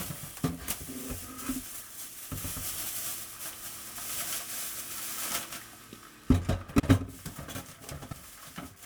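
At 1.64–1.81, 4.70–4.91, 6.68–6.90 and 7.91–8.13 s there are frames out of order. In each, two neighbouring blocks (78.4 ms the first time, 104.5 ms after) play swapped, giving a garbled flutter, but no time goes missing.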